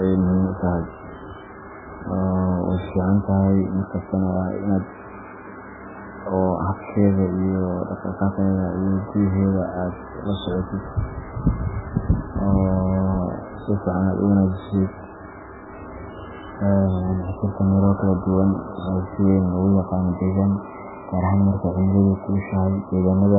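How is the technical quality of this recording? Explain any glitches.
Poor: the speech carries heavy, continuous coding damage from start to finish. Throughout, the audio sounds watery and swirly, with chirpy s sounds and smeared attacks, and likely comes from MP3 compression starved of bits, which fits a very low rate around 8 kbps. Weak frequency lines drop in and out between frames, and nothing survives above 3.8 kHz. A spectrogram shows a hard ceiling there and patchy, flickering blocks below it.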